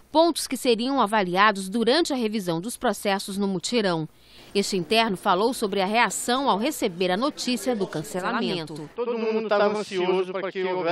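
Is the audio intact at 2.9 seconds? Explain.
Yes, the audio at 2.9 seconds is intact, with no dropout, click, distortion or other fault at that moment.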